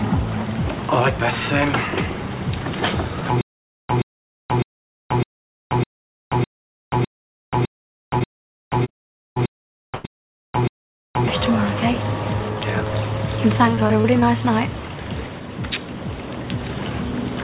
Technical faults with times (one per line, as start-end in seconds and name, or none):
3.41-11.28 stutter with silent gaps
7.94-10.77 repeated packet loss (robotic sound)
13.75-14.24 repeated packet loss (robotic sound)